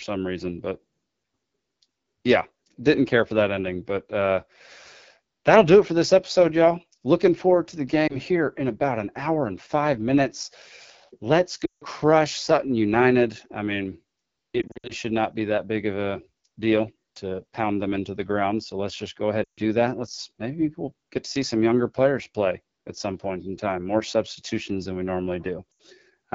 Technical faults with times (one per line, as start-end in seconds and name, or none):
0.00-26.35 AMR wideband (HD Voice) codec
8.07-8.17 lost AMR speech frames
11.65-11.84 lost AMR speech frames
14.61-14.93 lost AMR speech frames
19.43-19.60 lost AMR speech frames
25.72-25.82 lost AMR speech frames